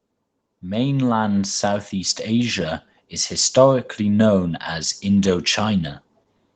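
Automatic gain rising runs from 0.6 to 4.6 s in this speech clip. The gain control judged the incoming level too quiet and raised its gain step by step, by about 10 dB overall, so the voice and the background noise swell together over those four seconds rather than the talker getting louder. The audio also shows the band limit of a call path, with nothing above 8 kHz, which points to a low-bitrate Opus encode.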